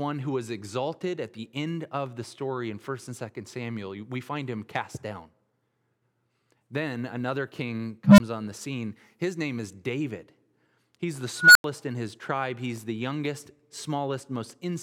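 At 8.04 s, right after "another king", an unstable filter takes over: a low tone near 200 Hz swells over 140 ms, clips, then cuts to 20 ms of silence before "on the scene". At 11.37 s a higher squeal near 1.5 kHz does the same, building over 183 ms and ending at 11.64 s in 90 ms of silence before "in his tribe". The recursion is running away; unlike acoustic feedback, each event ends in an abrupt dropout.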